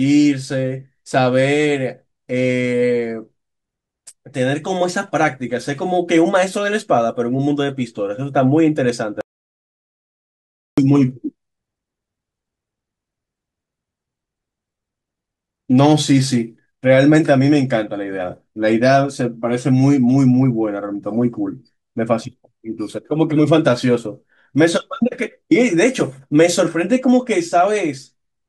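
At 9.21 s the speech cuts out abruptly and doesn't come back until 10.78 s, so about 1.57 s is simply gone. That's an audio dropout to silence: the gap is plain silence, with no room tone or hiss underneath, which is why it feels so stark. The input most likely got lost for a moment, a loose connection or a brief mute, while the recorder kept writing nothing but silence.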